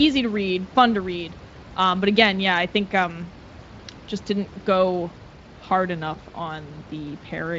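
No technical faults can be heard in this recording.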